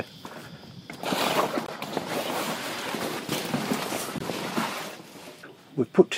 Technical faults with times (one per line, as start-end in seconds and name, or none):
1.66-1.68 gap between chunks
4.18 gap between chunks